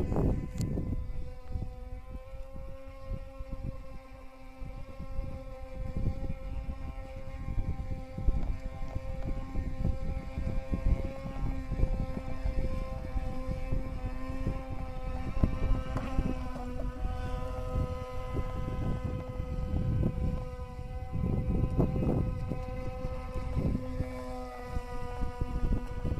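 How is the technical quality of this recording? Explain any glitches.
The recording carries one persistent fault, sample clock jitter, present throughout. A faint hiss and roughness rides on the sound, swelling on loud and bright passages and disappearing in silence. The converter's clock wanders by roughly a few microseconds, so samples land early or late, producing an error around 40 dB below the signal that tracks waveform slope.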